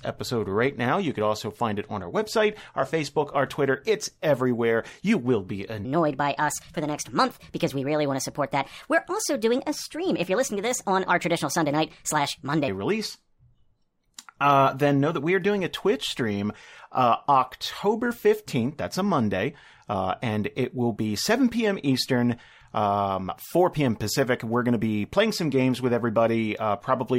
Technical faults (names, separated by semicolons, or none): section at the wrong speed